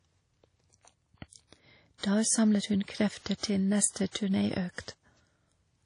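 WMA compression runs throughout the speech, with codec damage plainly audible from start to finish. The likely cause is an early Windows Media Audio encoder working at a low bitrate, which fits about 32 kbps. Its long transform blocks smear quantisation noise over tens of milliseconds around each sound, and weak spectral detail is discarded, with nothing above 10.1 kHz. The result rings and sounds washy, with a hiss that swells and fades along with the speech.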